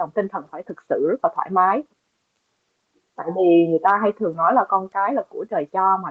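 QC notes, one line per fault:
No faults to note.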